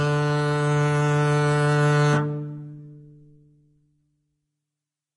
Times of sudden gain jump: none

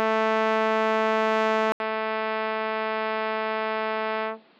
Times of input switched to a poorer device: 1.72-4.60

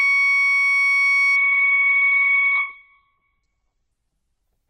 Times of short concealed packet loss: none

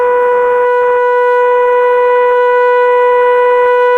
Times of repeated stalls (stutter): 2.07-3.59

